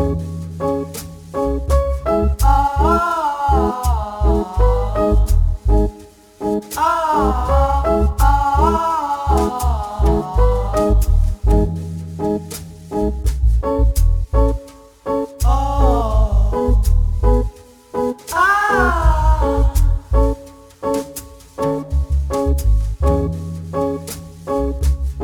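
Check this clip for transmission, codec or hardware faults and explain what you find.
One fault runs through the whole clip: crude rate conversion. The sample rate was changed by simply dropping the nearest samples, with no filtering, in a pattern that fits a 48 kHz to 44.1 kHz step. The repeating timing error, roughly 30 dB below the signal, adds a gritty, inharmonic fizz that follows louder and brighter passages.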